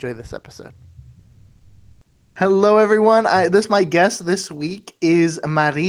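Comfort noise in place of the background runs from 1.19 to 2.35 s. The sender likely stopped transmitting during the pause (discontinuous transmission), so the receiver substituted a steady, featureless synthetic hiss for the real background, which sits about 48 dB below the loudest sound, and its level shifts by about 4 dB.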